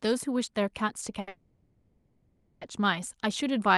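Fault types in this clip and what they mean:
Short stall from a late packet, 1.20 to 1.28 s: a late packet emptied the jitter buffer, so the last sound is held 70 ms, then resumes unbroken.
Call audio freeze, 1.28 to 2.62 s: a fading buzz fills 1.33 s without falling silent, likely from delayed packets draining the jitter buffer; audio then resumes where it stopped.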